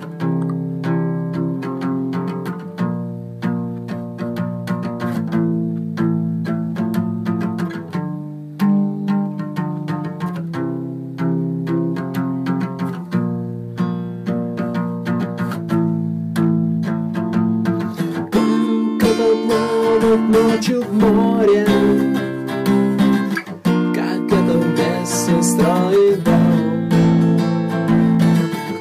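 From start to finish there's hard clipping. Something upstream got driven about 9 dB past what it could handle, so the peaks were sliced flat. Around 2 percent of the audio hits that ceiling, and the flattened tops throw up high harmonics you hear as crackle on the loud moments.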